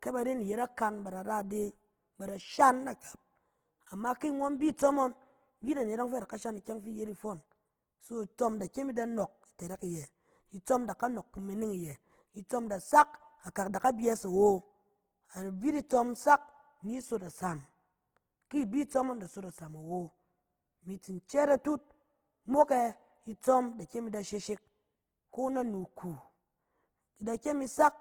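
Throughout the speech, the sound is rough and grainy, with a noisy texture where detail should be, though the spectrum stays fullband up to about 20.2 kHz. The likely cause is Opus compression in its music mode at a low rate, near 16 kbps.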